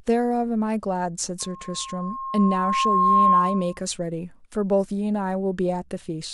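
Loudspeaker feedback squeal runs from 1.40 s to 3.81 s. A microphone is picking up the loudspeaker it feeds, and at 1.1 kHz the loop gain has climbed past unity, so that frequency keeps reinforcing itself on each trip around. The result is a single steady tone that swells over roughly two seconds into a piercing squeal, ending up somewhere around 10 dB louder than the speech before it stops at 3.81 s.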